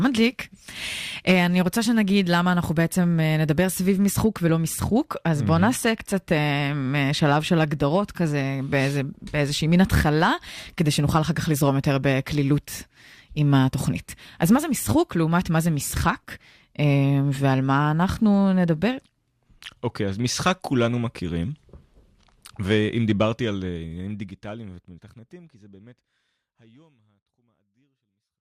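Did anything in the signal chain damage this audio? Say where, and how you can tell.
Yes, there's an overlap between stream segments problem at the network and playback stage. You get tiny skips at 4.49, 10.49 and 22.46 seconds, each a few milliseconds to about 14 ms long, where the waveform jumps forward. They fall on 6-second boundaries, which points to overlapping segment time stamps. The player trims the supposed overlap, but that audio wasn't really duplicated, so real material gets dropped. The fade-out from around 23 seconds is just a smooth edit.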